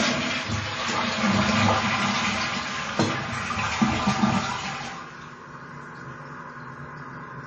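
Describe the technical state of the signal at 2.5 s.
At 2.5 s the sound is dull and muffled, with nothing above 8.2 kHz and a smeared, watery texture that persists across the whole clip. This is likely low-bitrate audio saved at a high bitrate: the sound fits a 32 kbit/s MP3 re-encoded at 320 kbit/s, which cannot restore the discarded detail.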